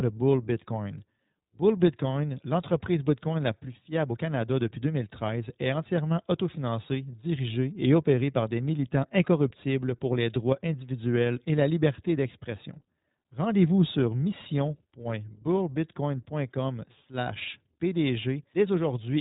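From start to finish the speech sounds boxed-in and slightly rough, with a faintly synthetic edge and nothing above about 3.8 kHz. That is the iLBC codec, which fits its 20 ms frame mode, with each frame's excitation coded independently.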